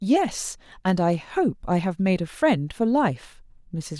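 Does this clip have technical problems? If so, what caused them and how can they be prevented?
No, the signal holds steady throughout this speech clip, with no technical problems to trace to a cause or guard against.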